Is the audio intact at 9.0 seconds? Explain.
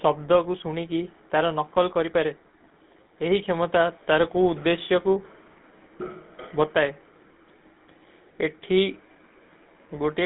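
No. At 9.0 seconds, as throughout the clip, the speech carries GSM full-rate codec damage: a buzzy, gravelly roughness that fits a 13 kbps stream. Excitation is modelled with regularly spaced pulses, which produces the rasp, and the band runs only from 150 Hz to 3.7 kHz.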